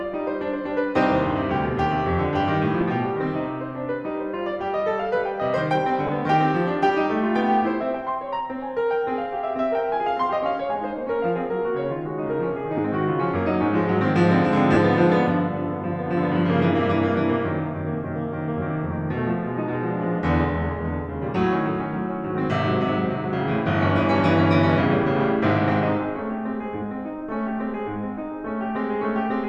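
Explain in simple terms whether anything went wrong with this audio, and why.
Four short dropouts interrupt the music, each caused by lost LE Audio frames on the Bluetooth link. They occur at 2.81 s, 6.07 to 6.09 s, 12.78 s and 14.73 to 14.77 s. When a frame goes missing, the LC3 decoder fills the gap by repeating the previous sound with scrambled detail, so sustained tones briefly blur into a hiss. The gaps last 7.5 ms, 15 ms, 7.5 ms and 30 ms, which points to one, two, one and four lost frames.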